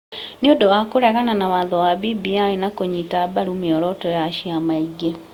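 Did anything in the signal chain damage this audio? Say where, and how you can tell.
Yes, and it's at the codec stage, across the whole speech clip. The sound has that swirly, hollow quality, and consonant attacks are smeared, which is more damage than a single lossy pass would leave. It's likely generation loss, with the audio encoded and decoded roughly four times, consistent with an Opus chain at 64 kbit/s. Each pass requantises on a shifted frame grid, so the noise builds up. Bandwidth still reaches about 20.2 kHz.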